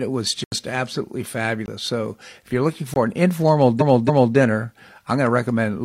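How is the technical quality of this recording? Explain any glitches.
The recording has three distinct kinds of technical fault.

Clock slip clicks run from 0.15 s to 5.79 s. Two devices were likely running on independent clocks about 300 parts per million apart, so a single sample slips roughly every 70 ms. Across the speech this produces a steady, faint ticking of around seventy tiny clicks.

Blocks of digital silence occur at 0.44 to 0.52 s (80 ms) and at 1.66 to 1.68 s and 2.94 to 2.96 s (20 ms each). Zeros replaced the audio, most likely because the output buffer wasn't filled in time. The speech drops abruptly to dead silence and returns without a fade. The first gap is an audible hole, and the shorter two sound like brief holes.

Repeated frames appear from 3.77 s to 4.32 s. A 279 ms stretch of compressed audio was delivered twice more than it should have been, so the decoder replays it. 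This makes a stutter and adds about 557 ms to the clip.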